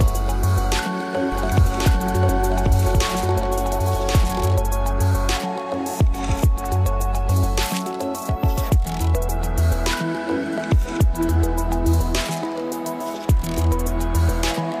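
From 1.32 s to 4.56 s the sound is a doubled audio track: a second full-band copy trails by about a second, roughly 5 dB quieter, dry, with no decay, and cuts in and out abruptly. The likely cause is a slower second capture path.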